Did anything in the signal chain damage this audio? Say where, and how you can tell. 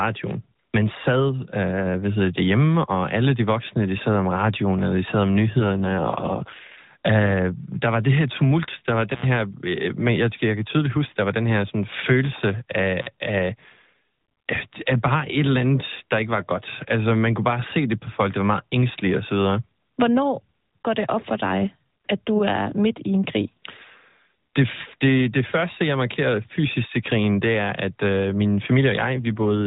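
Yes, at two stages. Twice the speech turns rougher and more synthetic, with no gap and no narrowing of the band. The first is from 5.58 to 6.82 s, right after "eller de sad om", and the second from 29.14 to 29.66 s, after "er at øh min". This is an AMR rate drop, from the codec and network stage. A weak radio link makes the network push the AMR-NB encoder into a lower mode, which fits a step down from 12.2 kbps to 5.9 kbps. That leaves fewer bits for the pulses driving its vocal-tract model, so the buzz thickens until the rate climbs back. The 4 kHz ceiling of the normal codec holds throughout.

The second fault comes from the analogue wiring. At 9.13 s the sound cuts out for about 88 ms, and at 12.99 s, just after "her sådan følelse af", it cuts out for about 48 ms. Each cut has a crackle at both edges and faint hiss while it lasts. This is intermittent contact: a loose plug or cable opens the circuit for a moment, and the scraping of the contact as it breaks and remakes produces the crackle on either side of the silence.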